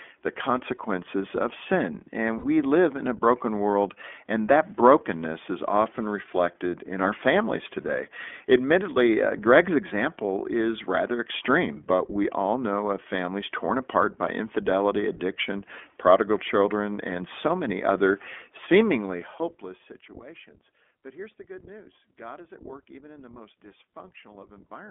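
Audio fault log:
Throughout, iLBC codec: narrowband sound held to roughly 250 Hz to 3.4 kHz, plainly rough and synthetic, consistent with about 15.2 kbps coding in 20 ms frames.
2.38 to 2.45 s, lost iLBC frames: after "the consequences of sin", a 60 ms held buzzy vowel repeats the last pitch cycle, then "we live in a" returns cleanly.
18.81 to 20.21 s, zipper noise: a level drop of roughly 20 dB applied in fast unsmoothed steps, around 150 per second, leaves a ticking zip riding on the sound.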